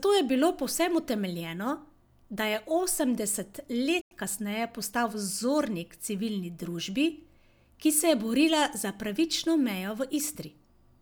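At 4.01 s the speech cuts out in a digital broadcast dropout, returning at about 4.12 s. The receiver stopped getting usable frames, through signal loss or failed checksums, and muted until clean frames arrived. The gap of about 96 ms fits roughly three lost frames. It is a hard hole in the sound with only a 3 ms fade at its edge. On a waveform it shows as a flat line, and on a spectrogram as a blank vertical band across all frequencies.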